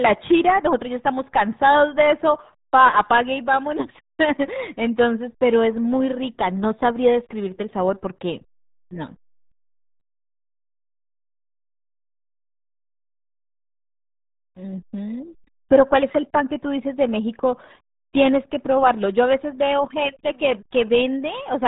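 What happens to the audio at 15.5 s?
At 15.5 s the speech carries the same RealAudio 14.4 codec damage present across the whole clip. Nothing above about 3.8 kHz survives, and the heavy coding that fits an 8 kbit/s dial-up speech codec leaves the voice muffled and gargly, with a wet, bubbling roughness. On a spectrogram the energy stops at a flat ceiling near 3.8 kHz, with smeared, blocky harmonics below it. The waveform looks smooth and lacks fine detail.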